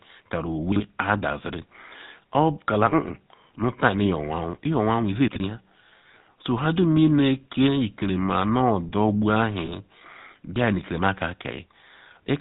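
Throughout the speech, the GSM full-rate codec leaves a buzzy, gravelly roughness and nothing above 4 kHz, which fits the 13 kbps full-rate scheme. Unlike plain low-pass filtering, it replaces natural breath and texture with pulse-driven harshness, and the damage is plainly audible.

From 9.66 to 9.72 s, lost GSM frames leave a brief rough, metallic ring where the decoder repeated its last good settings, hiding a single 20 ms gap. Unlike a dropout, nothing goes silent, and unlike a click, the repair is tonal.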